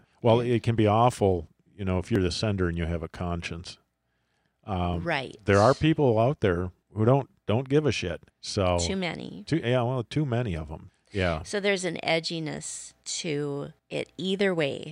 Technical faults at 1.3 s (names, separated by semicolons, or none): dropped buffer (overrun)